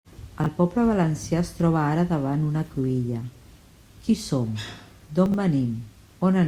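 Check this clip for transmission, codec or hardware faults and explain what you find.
Two faults of one kind are present in the speech: chunks out of order, at 0.40 to 0.46 s and at 5.26 to 5.34 s. In each, a short block of audio, which fits 20 ms chunks, arrived late and was played after material that should have followed it. The first is displaced by two chunks and the second by three. No audio is missing, but each reordering leaves three abrupt splices, heard as a brief jumbled stutter.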